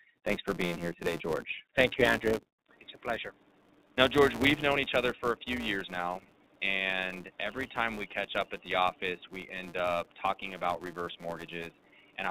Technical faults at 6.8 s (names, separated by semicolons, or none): iLBC codec; filter restarted on every block; input switched to a poorer device